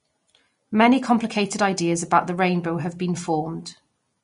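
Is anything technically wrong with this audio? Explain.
Yes. Vorbis compression damage runs throughout the whole speech clip. Nothing is present above 10.6 kHz, and the treble just below that cut-off is hissy and grainy, with roughened tones and softened consonant attacks. The likely cause is a low-quality Vorbis encode, which fits a bitrate of around 34 kbps. At that rate the upper detail is quantised so coarsely that it turns into noise of similar energy, and everything above the cut-off is removed.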